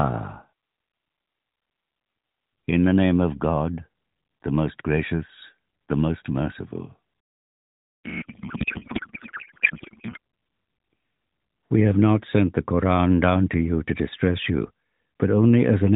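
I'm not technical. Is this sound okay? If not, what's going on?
No. From 8.05 to 10.18 seconds there is a codec payload misread. The phone-style speech codec that compresses this call sends its data packed one way, but the receiving end unpacks it as if it were packed a different, tighter way. Every piece of information lands in the wrong slot, so for those two seconds the speech is replaced by garbled noise and a warbling sound that barely follows it. After that, the two sides agree again.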